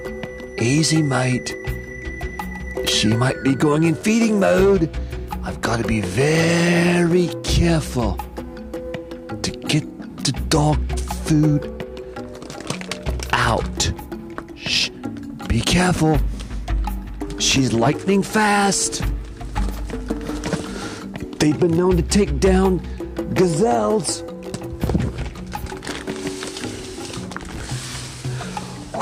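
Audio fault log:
4.01–4.03 s and 27.58–27.61 s, chunks out of order: two adjacent blocks of about 10.7 ms swap places, so one plays a block late. Three hard joins give a brief jumbled moment. The waveform shows discontinuities, and the spectrogram shows thin vertical broadband lines.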